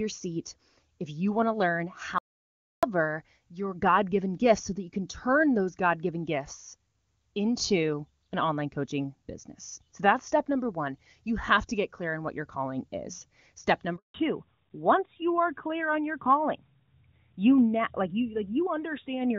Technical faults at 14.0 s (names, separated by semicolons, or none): handover gap